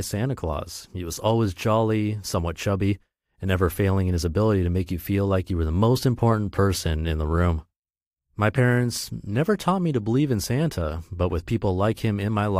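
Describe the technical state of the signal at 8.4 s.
At 8.4 s the speech signal is intact, with no fault present at that moment.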